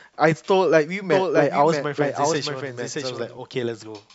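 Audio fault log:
1.12–3.38 s, doubled audio track: a second copy of the speech trails roughly 0.7 s behind, about 5 dB quieter, dry and full-band, starting and stopping abruptly. The likely cause is a slower second capture path or an edit holding the same audio twice, out of step.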